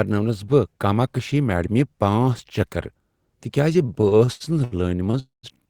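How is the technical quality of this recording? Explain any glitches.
The recording has two network glitches near its end, both of which drag the speech out without losing any of it.

From 3.79 to 5.17 s the speech drags and stutters in repeated stalls. There are twelve short hitches, the longest about 74 ms, and together they add roughly 322 ms, close to a quarter of that stretch. Packets arrived late or too slowly, so the jitter buffer kept running dry and the receiver stretched the last sound until more data came.

From 5.20 to 5.46 s a call audio freeze holds the last sound as a fading buzz or hiss before about 150 ms of silence. The speech then resumes where it stopped, 237 ms late. The likely cause is packets held up in transit that emptied the jitter buffer, so the receiver inserted a gap rather than dropping anything.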